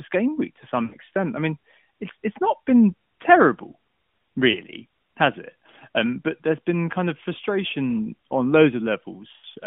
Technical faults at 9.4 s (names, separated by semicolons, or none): lost AMR speech frames